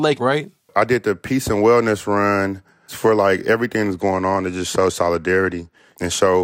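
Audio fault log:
3.88–6.44 s, Bluetooth SBC bit pool drop: just after "run for like everything" the speech turns dull and gritty to the end of the clip. The sound fits the encoder halving its bit pool from 28 to 14, near 108 kbps, as the link congests. The top sub-bands lose their bits and the rest are quantised coarsely. A spectrogram shows the upper band going dark, with grainy speckled noise across the remaining bands. The waveform envelope barely changes.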